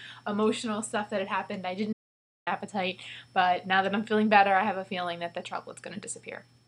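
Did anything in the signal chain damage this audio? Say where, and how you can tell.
Yes. There is an audio dropout to silence from 1.93 s to 2.47 s, about 0.54 s of the signal simply gone. The sound cuts off mid-flow and the gap is silent, with no room tone or noise floor underneath, then resumes abruptly. That points to the input being lost upstream while the recorder kept writing samples, likely a momentary disconnect or dropped link at the device or driver stage, rather than anything in the acoustic path.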